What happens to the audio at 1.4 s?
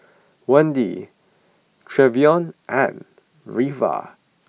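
Nothing goes wrong at 1.4 s; the speech carries on intact through that moment, with no dropout, click or distortion.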